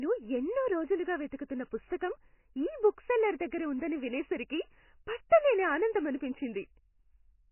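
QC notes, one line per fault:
Throughout, MP3 compression: the speech has nothing above 3 kHz, so it sounds dull and boxed-in, and heavy codec damage leaves a watery, swirling texture with metallic chirps on s sounds and smeared consonant attacks. This is likely from a very low-bitrate encode, around what 16 kbps would give, where the encoder cuts the treble and zeroes weak frequency lines that flicker between frames. On a spectrogram there is a hard ceiling at 3 kHz with patchy, blocky holes below it.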